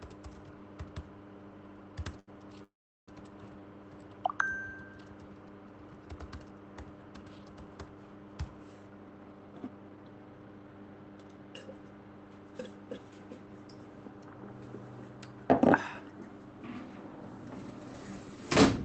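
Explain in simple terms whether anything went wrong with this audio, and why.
A packet of audio arrived late at about 2.19 s, and the receiver's small waiting store, the jitter buffer, ran empty. The receiver held the last sound for about 80 ms until the packet came, and then carried on. This short stall from a late packet leaves a sound drawn out slightly too long up to 2.30 s, with nothing lost.

From 2.64 to 3.09 s there is a call audio freeze. The audio stops moving forward. The last sound trails off, and most of that stretch, about 370 ms, is silent. The likely cause is packets held up on the network, which emptied the jitter buffer again. When the audio resumes, it picks up exactly where it stopped, so a gap of about 440 ms has been added and nothing is missing.

Later, the buffer was holding more audio than it needed, and the receiver trimmed tiny slices to catch up. This jitter buffer speed-up makes the audio run faster with no change in pitch: about 14% faster from 8.76 to 11.67 s, which removes around four tenths of a second; 12% faster from 13.39 to 13.97 s; and 11% faster from 16.53 to 16.82 s.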